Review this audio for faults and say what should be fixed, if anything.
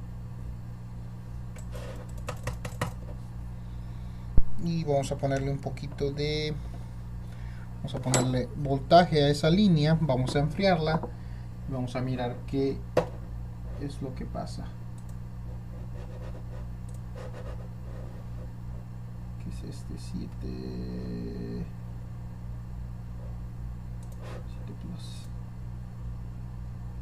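A phantom power thump runs from 4.38 s to 4.75 s. It is a deep, low-frequency thud that peaks at about -6 dBFS and falls away with a decay of roughly 83 ms, followed by a short tail. It happens when a supply is switched on a live input: the sudden DC step passes through the input's coupling capacitors and comes out as a single large pulse. To prevent it, mute or pull down the channel before switching phantom power.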